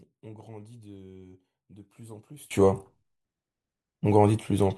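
One channel inverted, from 0.0 to 2.51 s: the speech drops by about 23 dB to a faint copy. Likely one stereo channel has reversed polarity, so the centred voice cancels when both channels are summed to mono.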